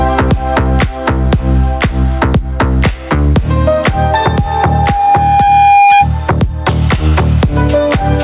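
Gain pumping runs through the whole clip: the background swells in gaps and ducks roughly 10 dB under loud sounds, likely from excessive mic gain hitting a fast limiter. From 4.23 to 6.08 s, a loudspeaker feedback squeal appears as one steady 808 Hz tone growing over about a second and a half to about 5 dB above the audio. Unlike an interfering whine, it builds on its own as the loop recirculates.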